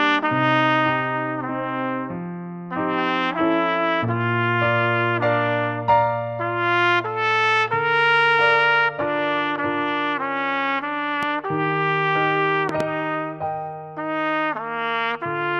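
The audio carries three loud pops. A single sharp pop sits at 11.23–11.25 s, about 10 dB above the sound. A double pop follows at 12.69–12.83 s, about 15 dB above it. The sound continues underneath. A voltage spike from a plug, switch or static is the likely cause.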